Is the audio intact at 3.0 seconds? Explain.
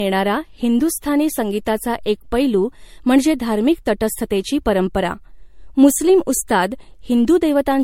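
No. Generation loss spans the whole clip, 3.0 s included: the speech was likely re-encoded as MP3 about four times, fitting a 64 kbit/s setting, each pass requantising on a shifted frame grid. Accumulated noise and spectral holes sound swirly, hollow and smeared, attacks blur, and nothing remains above 16.5 kHz.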